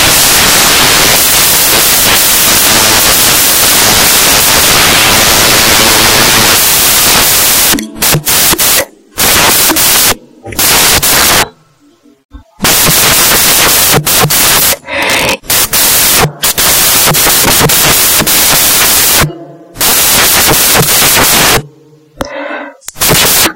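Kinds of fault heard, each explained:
Samples built from the wrong bytes, throughout: the bytes that make up each sample are being combined incorrectly, whether shifted by one byte, taken in reversed order or read on the wrong alignment, so the rapidly fluctuating low-order bits land in the most significant position. The result here is a dense, loud, harsh noise, close to white on the louder sounds, running through the whole recording.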